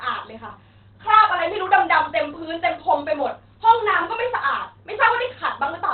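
From start to finish the speech sounds muffled and hoarse, with nothing above about 4.3 kHz, so the top end is just gone. That's likely Opus compression at a very low rate. Squeezed that hard, the encoder narrows the band and switches to its SILK speech mode, which models the voice sparsely and leaves that dull, rasping quality. The damage is plainly audible, and the sound fits a bitrate around 16 kbps.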